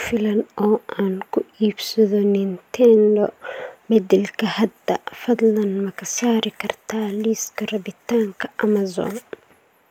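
Speech with no audible faults.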